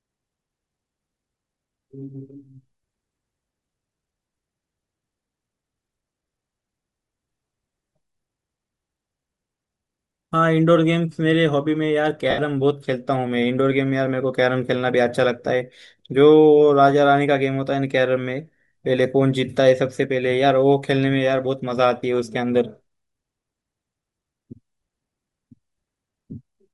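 From start to finish the speech carries a breathy, grainy edge. The upper spectrum sounds thinned and partly replaced by hiss. That codec damage is plainly audible. The likely cause is Bluetooth LC3 compression, the transform codec of LE Audio. At a modest rate it discards much of the high band and fills the gaps with shaped noise. The texture fits a stream near 48 kbps using short 7.5 ms frames.

At 12.30 s a run of lost LE Audio frames begins. It ends at 12.39 s, about 75 ms later. That span fits ten missing 7.5 ms frames. The decoder covers the gap by repeating its last spectrum with scrambled signs, fading it as the loss continues. The speech there briefly sags in level before the signal returns.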